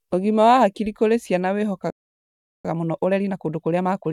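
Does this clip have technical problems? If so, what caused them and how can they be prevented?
Yes. Just after "wa hakiri kũrĩ ciana", the speech cuts out mid-flow from 1.90 to 2.65 s, a gap of about 0.74 s, then resumes. This is a playback stall, likely the player running short of buffered data or its audio thread being blocked. A larger playback buffer and a higher-priority audio thread would prevent it.

From 2.65 s to the end at 4.13 s, the speech is hurried at normal pitch, running about 1.25 times faster. This is time-compressed catch-up: the player drains the backlog left by the stall by cutting small pieces out and cross-fading the joins. Preventing the stall removes the need for it, and a gentler catch-up rate would make any remaining speed-up less noticeable.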